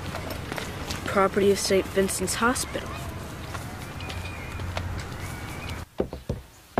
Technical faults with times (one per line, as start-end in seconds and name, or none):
none